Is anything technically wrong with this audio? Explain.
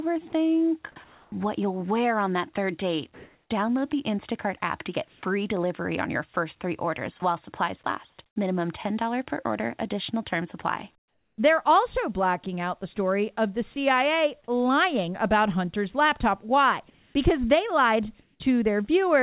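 Yes. The voice detector is gating the sound, and it sounds as if the call path, which carries nothing above 4 kHz, is doing it.

Sound chopped by the voice detector occurs from 0.3 to 1.32 s, just before "you'll wear on that", and from 5.08 to 8.36 s, after "app to get". The detector likely switched sending on and off repeatedly. About 340 ms and 360 ms of sound became comfort noise, leaving holes.

Comfort noise in place of the background fills 3.14 to 3.5 s, after "on that third date", then 10.98 to 11.38 s and 16.9 to 18.4 s. It is likely discontinuous transmission. The receiver synthesised noise for the pauses. The noise is about 10 dB louder in the first gap and about 10 dB quieter in the second.

Sound dropped by the voice detector occurs at 13.74 to 13.76 s. The detector likely mistook about 10 ms of sound for background. That sound gives way briefly to steady noise or near silence.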